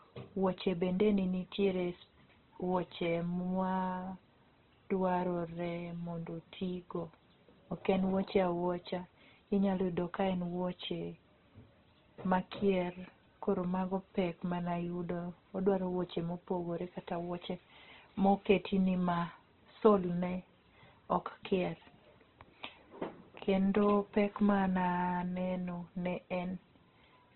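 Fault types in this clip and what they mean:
Opus compression: Throughout the speech, nothing is present above 4.2 kHz, and the remaining band sounds rough, grainy and noisy rather than hollow or swirling, because thin bands are filled in instead of left empty. The damage is heavy. That character points to Opus coding at a very low rate, likely in its music (CELT) mode. It fits a bitrate around 12 kbps, where the encoder narrows the bandwidth to spend its few bits on fewer bands.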